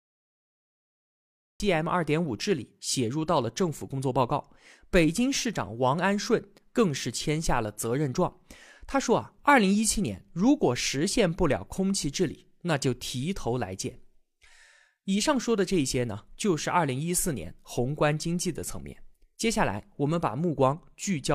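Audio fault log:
0.0–1.6 s, cut-off start: digital silence, then speech enters mid-sound at 1.6 s. Capture began late. So there is no natural attack or fade-in.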